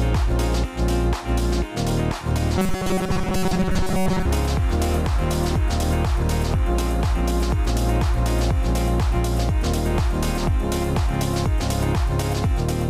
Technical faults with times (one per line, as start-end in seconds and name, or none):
2.58-4.26 robotic sound from repeated short buffers